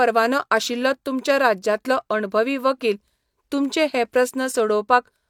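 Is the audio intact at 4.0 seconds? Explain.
Yes, at 4.0 seconds the speech plays through intact, with no dropout, click or other audible fault at that moment.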